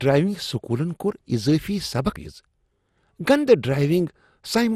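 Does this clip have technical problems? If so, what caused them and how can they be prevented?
Yes. Throughout the speech there is generation loss: the sound is swirly, smeared and hollow, consonant attacks are blurred, and nothing is present above 15.9 kHz. This likely comes from repeated lossy decoding and re-encoding, around ten passes, and the artefacts point to MP2 at about 96 kbit/s. Each pass quantises again on a shifted frame grid, so noise and spectral holes accumulate. To prevent it, keep a lossless master and encode to the lossy format only once, at the final step.

At 2.16 s there is a CD skip: a short tick and a near-silent gap of a few milliseconds, after which playback continues from a different point in the material. A knock or a surface flaw made the laser jump to another turn of the disc's spiral. The player muted briefly and resumed from the new position, so the continuity of the sound breaks. 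To prevent it, clean or replace the disc, isolate the player from vibration, or rip with a secure, error-checking extractor.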